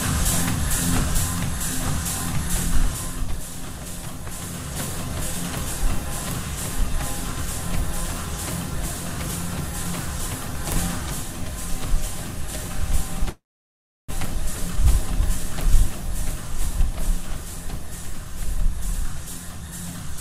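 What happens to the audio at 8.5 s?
Nothing goes wrong at 8.5 s; the sound carries on intact through that moment, with no dropout, click or distortion.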